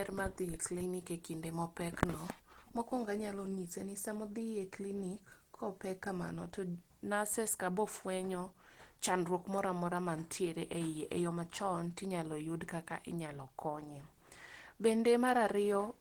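A speech clip with plainly audible Opus compression throughout, likely from a low bitrate around 16 kbps in hybrid mode: the voice sounds hoarse and grainy rather than swirly as with MP3, since bands are noise-filled instead of emptied, and the band still reaches about 20.2 kHz.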